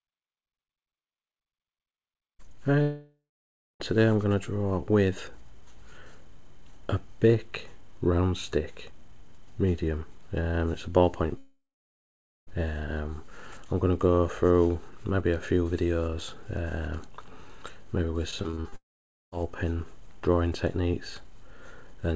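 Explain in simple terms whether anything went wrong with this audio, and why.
Three times the sound stops and then picks up again further on: from 2.82 to 3.82 s, from 11.38 to 12.49 s, and from 18.76 to 19.34 s. Each time the last bit of sound keeps going as a fading buzz or hiss, then gives way to silence for roughly half a second (closer to 0.8 s in the middle one). That is a long network dropout. The likely cause is that audio stopped arriving over the connection, so the receiver stretched out what it had until it ran out, and the missing part was simply skipped.

Just before the last dropout, from 18.31 to 18.74 s, the sound turns choppy, with small pieces missing. This is repeated packet loss (robotic sound). Chunks of audio were lost six times in quick succession, the longest gap about 41 ms. Each time the receiver covered the hole by continuing the previous sound, so about a third of that short stretch is filled-in sound rather than the real thing.

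The call connection itself carries nothing above 8 kHz, which is why the top end of the sound stops there.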